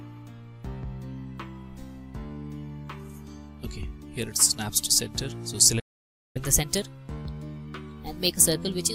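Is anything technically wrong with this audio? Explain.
Yes. There are two linked faults.

A playback stall runs from 5.79 to 6.37 s. The sound cuts out mid-flow for about 0.55 s of silence, then resumes where it stopped. The player likely ran out of data or had its thread blocked.

Catch-up at higher speed follows from 6.37 s to the end. The player works through its backlog by resampling at 1.15 times normal speed. Tempo rises, and pitch goes up by roughly two semitones, so everything sounds hurried and sharp.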